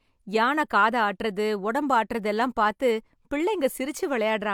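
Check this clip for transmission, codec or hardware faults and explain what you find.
The speech signal stays continuous and stable throughout, with nothing to suggest a problem in how it was carried, encoded or captured.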